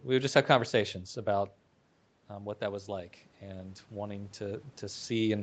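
Speech, with an automatic gain rising fault from 2.29 s to 5.14 s. The input drops by about 9 dB. The automatic gain control reacts slowly, lifting its gain by about 4 dB over nearly three seconds. The voice and room noise swell together.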